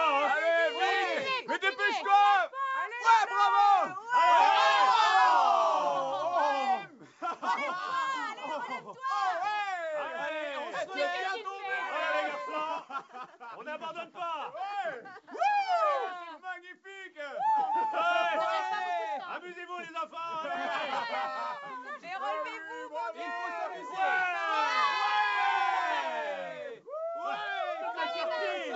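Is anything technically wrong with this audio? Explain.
No, nothing is technically wrong with this audio. It has passed through a working call path whose codec leaves nothing above 8 kHz, a band limit that points to a wideband call codec such as G.722.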